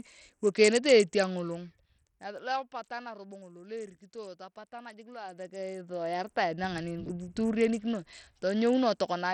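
Right through the speech, the treble is gone above 15 kHz and there's a gritty, aliased edge, likely heavy Bluetooth SBC compression at a low bitrate, around 64 kbps. From 4.88 to 6.2 s, the level changes around 20 dB in 1 dB steps, about thirty a second, with no smoothing, so you hear zipper noise ticking over the sound.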